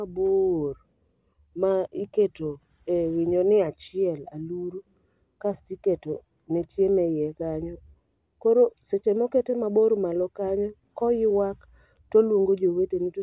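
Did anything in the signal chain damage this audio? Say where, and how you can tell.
No, nothing in the signal chain damaged this audio.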